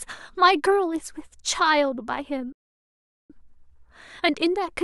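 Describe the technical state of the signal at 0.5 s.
At 0.5 s the speech signal is intact, with no dropout, distortion, glitch or other audible fault at that moment.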